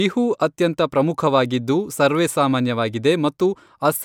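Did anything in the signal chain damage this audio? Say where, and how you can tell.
No, nothing in the signal chain damaged this speech.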